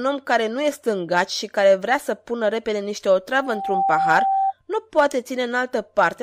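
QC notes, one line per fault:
3.35–4.53 s, loudspeaker feedback squeal: over the speech a single steady tone at 780 Hz swells up in about half a second and then rings on as a piercing squeal that stands roughly 5 dB above the speech until it cuts off at 4.53 s. The microphone is picking up the loudspeaker it feeds, and at 780 Hz the loop gain has gone past one, so that frequency keeps feeding itself and grows until the amplifier limits it or the loop is broken.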